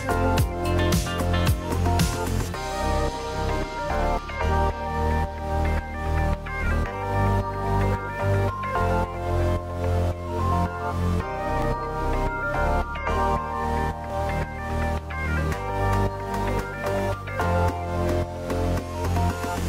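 Short skips at 1.71, 4.19, 9.14, 11.62, 14.10 and 16.58 s, spaced about 2.5 s apart, are audio missing between chunks: roughly 20 ms likely dropped at each chunk boundary. Each sounds like a tiny jump, and shows as an abrupt waveform discontinuity and a thin vertical broadband line on a spectrogram.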